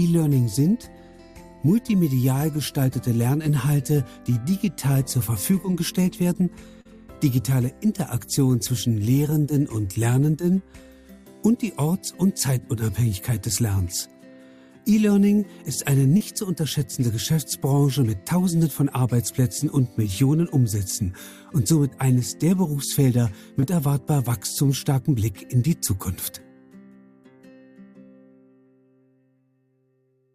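Short concealed packet loss at 6.81–6.87 s, 16.17–16.22 s and 23.60–23.64 s: chunks of 40, 40 and 20 ms arrived too late, so the decoder extended the preceding sound to fill each gap, leaving a brief smear before the real audio resumes.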